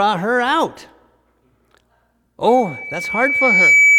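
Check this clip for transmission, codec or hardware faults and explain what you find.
One fault is present: loudspeaker feedback squeal from 2.48 s to the end. A 2.3 kHz tone swells over about a second to well above the speech, as microphone-to-loudspeaker loop gain exceeds unity there.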